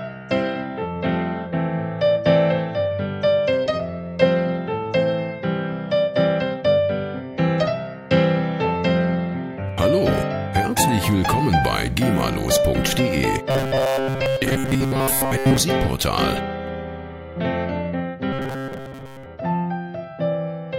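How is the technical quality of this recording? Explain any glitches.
Two robotic buzz passages, 13.51–15.59 s and 18.33–19.26 s, show robotic sound from repeated short buffers. A fixed 134 Hz tone replaces most of the sound, likely from repeating a 7.5 ms buffer. Unlike plain dropouts, the gaps are filled with a steady metallic pitch.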